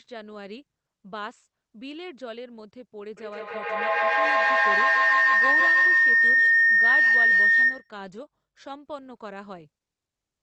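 From 3.17 s to 7.97 s a feedback howl takes over: sound leaving a loudspeaker re-enters a microphone on the same call and returns louder on each pass, so the loop narrows onto a tone near 2 kHz. It pulses roughly every 150 ms, swelling to about 16 dB above the speech. A spectrogram shows a bright horizontal band near 2 kHz, striated at that pulse rate, over content that stops near 8 kHz from the call codec. The waveform balloons, then drops at 7.97 s.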